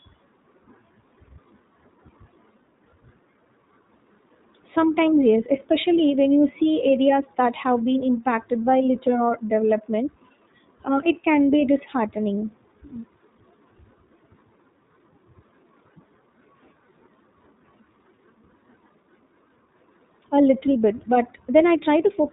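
From start to finish the speech carries iLBC codec damage, and it is plainly audible. Everything above 4 kHz is gone, so sibilants lose their edge and the sound is confined to telephone band. The coding works on 20 ms frames, each excitation built independently of the previous one. The result sounds slightly rough and synthetic. That fits a bitrate of about 15 kbps, the codec's 15.2 kbps mode.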